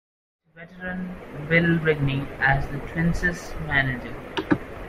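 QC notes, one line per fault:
Nothing to flag here, just a gentle fade-in at the top that rises from around half a second and reaches full level by 1.76 s.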